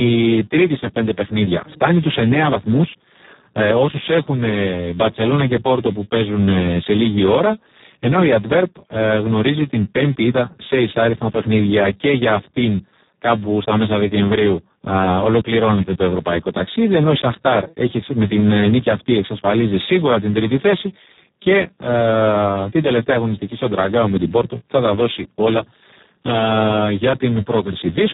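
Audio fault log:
throughout, Speex codec: the speech is heavily degraded, coarse and hoarse with a buzzy, robotic edge, and nothing is present above 3.8 kHz. This CELP codec models the vocal tract well but has very few bits left to code the excitation signal, so the pulse and noise detail that gives speech its natural texture is crudely approximated. Damage this severe points to one of the lowest settings, roughly 4 kbps, where the codec behaves almost like a vocoder.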